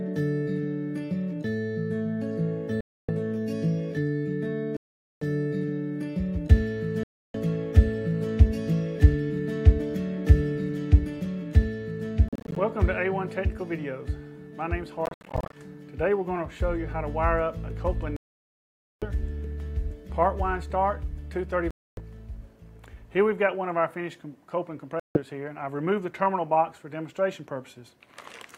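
Silent gaps at 2.81, 4.77, 7.03, 12.28, 15.06, 18.16, 21.71 and 25.00 s are likely Bluetooth dropouts: late packets were discarded, leaving blank spectrogram columns and flat waveform stretches. The longest lasts 0.85 s. The sound resumes further along, and at 12.28 and 15.06 s the holes break into short fragments.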